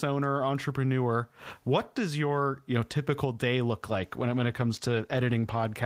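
From 3.88 s to 5.81 s, right after "know typical day look", a call bitrate drop from 32 to 15 kbps codes the speech coarsely, leaving it rough and watery.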